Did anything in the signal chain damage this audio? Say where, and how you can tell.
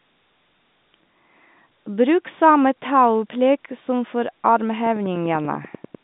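Yes. A regular train of clicks, 10.2 per second, runs from 4.86 to 5.96 s, louder than the speech. This is likely interference in the analogue wiring.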